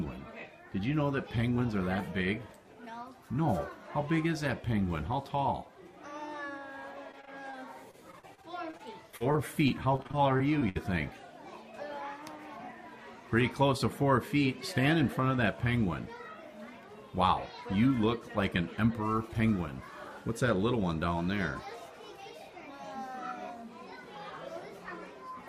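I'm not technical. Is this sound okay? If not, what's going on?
No. There is repeated packet loss (robotic sound) at 7.11 to 7.55 s and again at 7.91 to 10.77 s. Small chunks of audio kept getting lost in transmission, and the system patched each hole by stretching the last sound, so these stretches sound choppy and robotic, with bits missing.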